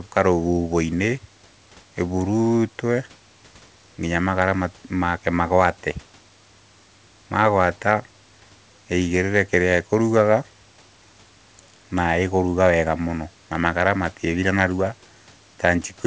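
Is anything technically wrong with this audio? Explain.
No, nothing is wrong: the speech stops at 8 kHz, consistent with a G.722 call path, and the room noise sits about 36 dB below it.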